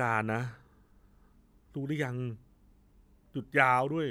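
No technical faults can be heard anywhere in the speech.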